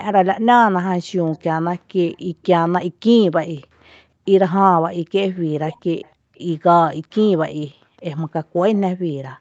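A speech recording in which a faint delayed copy of the talker, trailing by 305 ms and well below the direct sound, surfaces at 1.33–1.4, 2.13–2.46, 3.31–3.35, 6.02–6.39 and 8.75–8.8 s, likely echo leak past a loudspeaker-side canceller rather than room reverberation, which would not repeat at one fixed delay. The room background is gated by the echo canceller at 3.93–4.29 and 4.76–5.13 s, dropping about 40 dB and returning intact. Because the background itself vanishes, these are gating rather than network dropouts. At 5.48–5.93 s the talker's own voice sinks steeply in pieces, likely speech suppressed in double talk, with the sound extending up to 8 kHz when present.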